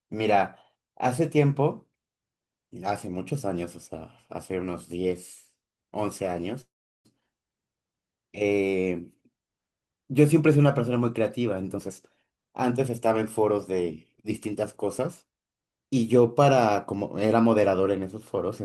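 A speech recording with two kinds of fault. From 6.61 to 7.07 s there is a call audio freeze: a brief fading continuation, then about 0.38 s of silence, likely from held-up packets draining the jitter buffer. Unlike a dropout, the speech resumes exactly where it stopped, with nothing lost. Jitter buffer speed-up follows from 11.70 to 13.88 s at 115% speed, trimming roughly 0.3 s, and from 14.29 to 15.42 s at 108%, trimming about 0.1 s. The speech sounds hurried while pitch stays unchanged, which distinguishes it from a sample-rate error.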